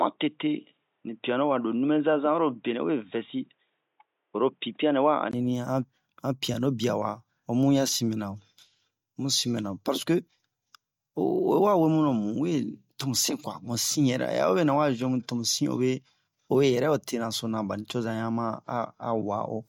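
Until 5.33 s the speech sounds dull, nothing above 3.8 kHz: likely an input switched to a poorer device. A 20 ms gap marks the change.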